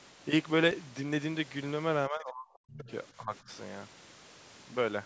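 From 2.08 to 2.88 s the speech drops sharply, sinking by something like 40 dB at its deepest and affected for most of that stretch. That's speech suppressed in double talk, likely from the echo canceller hearing both ends at once and ducking everything because it couldn't tell the local talker from the loudspeaker echo. Right at the tail of that dip, 2.82 to 2.92 s, a faint scrap of the other side's voice leaking through shows up, sitting roughly 25 dB under the speech. It's most likely residual loudspeaker echo the canceller failed to strip from the mic. Then at 3.17 to 3.49 s there's a second, gentler round of suppression, a dip of around 10 dB lasting a couple of tenths of a second, again likely the same double-talk ducking. All of this sits inside the usual call microphone processing, which stops at 8 kHz.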